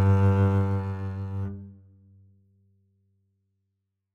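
Zipper noise runs from 0.47 to 1.27 s, while the music's level falls by roughly 15 dB. Instead of gliding down, the gain drops in coarse, unsmoothed steps, around 40 a second. Each jump puts a tiny discontinuity into the waveform, so the fade carries a fast ticking, zipping texture on top of the music. It stops once the level settles.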